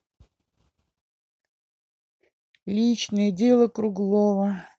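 Speech carried over a WebRTC call path whose top end stops at 8 kHz, consistent with Opus coding, with no technical faults to report.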